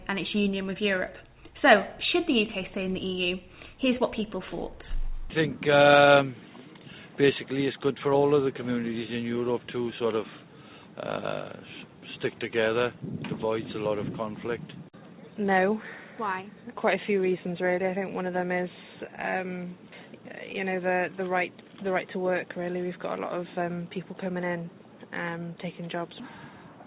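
Nothing stood out on listening, beyond the narrow call-codec bandwidth with nothing above 4 kHz.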